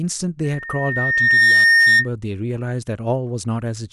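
Loudspeaker feedback squeal runs from 0.43 s to 2.08 s. The microphone is catching its own loudspeaker output, and around 1.8 kHz the round-trip gain exceeds unity, so that one frequency keeps re-amplifying itself. A thin, steady tone appears beneath the speech and swells over about a second into a piercing squeal, eventually sitting roughly 10 dB above the speech before it stops at 2.08 s.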